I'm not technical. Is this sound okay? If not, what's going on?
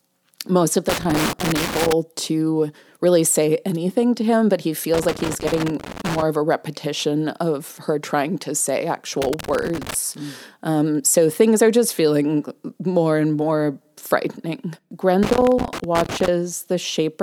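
No. Four bursts of loose connector crackle break through the speech: 0.89 to 1.93 s after "most of", 4.94 to 6.22 s, 9.22 to 9.94 s, and 15.23 to 16.28 s. A worn or dirty contact keeps cutting in and out, causing scratchy pops.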